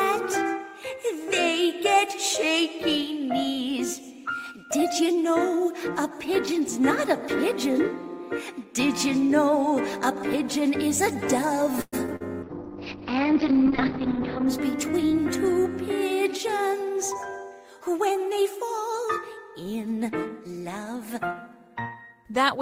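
The audio has three network-related faults in a row. From 11.81 to 12.22 s, repeated packet loss leaves four short holes, the longest 112 ms, and patching them covers about 41% of the stretch. The result is choppy and robotic rather than a single clean dropout. From 12.44 to 14.54 s, a call bitrate drop makes the sound coarse and watery, with the top cut off near 6 kHz instead of 20 kHz. That combination fits the encoder falling from about 32 to 7 kbps, and is more than plain filtering would produce. From 14.80 to 17.14 s, a jitter buffer speed-up plays the audio about 4% fast by trimming roughly a tenth of a second in total. The pitch stays put, which separates it from resampling.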